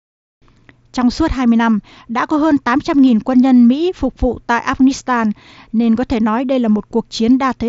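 No technical faults are audible in this speech recording, which arrives over a Bluetooth mSBC headset link at 61 kbps with the light coloration that codec normally leaves and a bandwidth topping out near 8 kHz.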